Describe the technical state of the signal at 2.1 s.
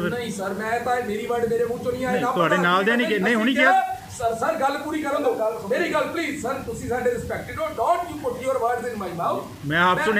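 At 2.1 s the audio shows low bit depth without dither, as it does for the whole clip. The sound is grainy and gritty, and the distortion shifts as the sound changes. Quiet passages break up or sputter. The likely cause is a signal reduced to about 7 bits and rounded without dither. The rounding error tracks the waveform. It sits only about 25 dB below the sound.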